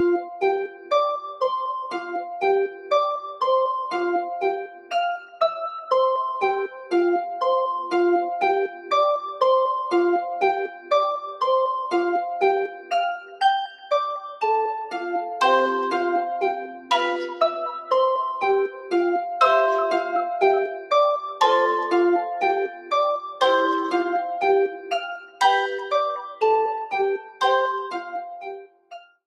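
A noise suppressor applied to music or sounds stays active throughout. It treats sustained, steady content as noise and pulls it down by around 10 dB, so the level pumps and thins. On a waveform, the envelope dips after each attack. A spectrogram shows held energy and tails fading unnaturally fast.

Sound cut by the noise suppressor appears at 0.21–2.91 s (deepest about 12 dB), 4.63–6.92 s (about 14 dB), 8.68–8.91 s (about 8 dB), 10.68–10.91 s (about 10 dB), 12.68–13.91 s (about 11 dB), 16.67–18.92 s (about 10 dB), 20.73–20.91 s (about 10 dB) and 22.68–29.15 s (about 17 dB, the deepest and longest). In each, sustained portions sink while onsets survive, leaving gaps and hollow decays. These show as carved-out notches in the waveform and darkened spectrogram regions.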